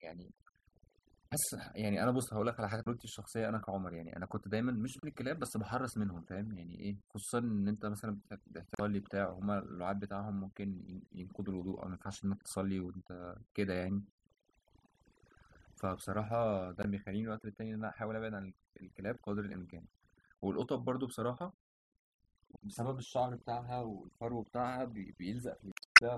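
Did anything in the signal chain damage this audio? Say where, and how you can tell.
Yes. Overdone noise removal runs throughout, at the processing stage. Bands near the noise floor are cut away, leaving twinkling near-silence.

Damaged data in the compressed stream, at the codec or storage stage. Blips of about 50 ms start at 2.82, 4.99, 8.75 and 16.80 s, and a longer one runs 25.72 to 26.03 s. The decoder loses sync.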